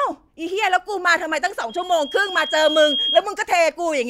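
From 1.69 s to 3.25 s the speech is overtaken by loudspeaker feedback squeal: a microphone re-amplifies its own loudspeaker until a 3.3 kHz tone self-sustains, swelling over about a second and a half to roughly the speech's level. A spectrogram shows a bright, thickening horizontal line at 3.3 kHz.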